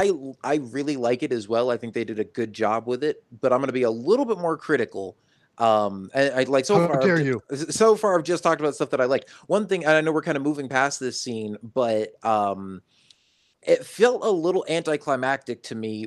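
Speech, where the pause between "this scene but um" and "it felt a little" (13.13 to 13.61 s, about 480 ms) carries comfort noise in place of the background. It is a flat, featureless hiss at the same level, about 51 dB below the loudest passages, likely from Opus discontinuous transmission. On a spectrogram that stretch shows smooth, uniform noise below the codec's cut-off near 12 kHz, without the textured detail on either side.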